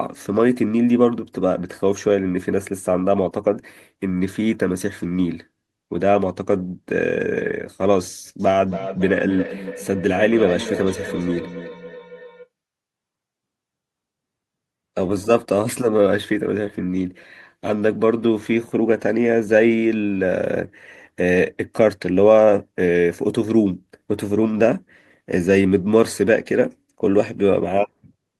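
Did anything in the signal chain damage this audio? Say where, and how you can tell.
Yes: feedback echo between two devices, from 8.4 to 12.49 s, in call processing. Speech returns roughly every third of a second, thinner and ringing, peaking about 11 dB below the voice. A second device's playback reaches the microphone, outside the first device's echo canceller.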